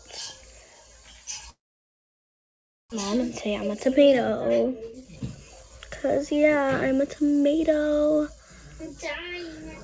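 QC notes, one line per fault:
1.50–2.94 s, long network dropout: packets likely stopped arriving here, so the receiver carried the last sound on as a short fading buzz or hiss, then fell to silence for about 1.3 s. Roughly a second of audio never plays, and the sound resumes further along.
3.13–6.63 s, jitter buffer speed-up: after the gap the buffer held roughly 400 ms more than its target, so the receiver repeatedly cut out short pitch-period slices to drain it. Playback runs at 111% speed with unchanged pitch, sounding hurried.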